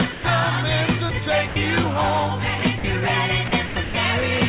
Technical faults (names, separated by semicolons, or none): sound dropped by the voice detector